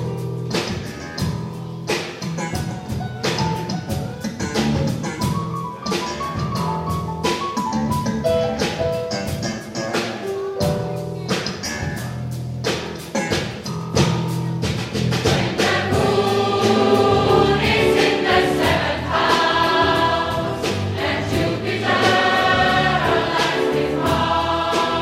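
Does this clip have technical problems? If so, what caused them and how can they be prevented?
No, nothing in the audio points to a technical fault, so there is no cause to trace and nothing to prevent.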